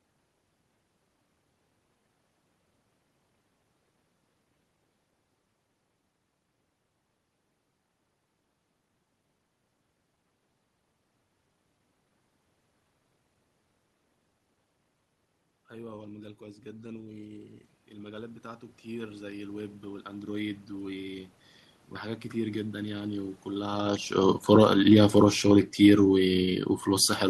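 From 15.68 s to 21.28 s the automatic gain control is rising. Finding the input too quiet, it raises its gain slowly by about 12 dB over more than five seconds. The room noise grows along with the speech, which separates this from a talker moving, as heard around 5.5 s, where only the voice changes and the background stays put. That shared, gradual swell is the mark of gain applied to the whole signal.

From 24.19 s to the end of the clip the automatic gain is falling. The control has judged the input too loud or its background noise too strong and pulls its gain down steadily, so the speech starts loud and sinks, with the room noise sinking with it. Just before this, around 23.5 s, the talker moves, changing the voice level while the background holds steady. In the fall that follows, voice and background drop together, which marks it as a gain change rather than a change in the talker's position.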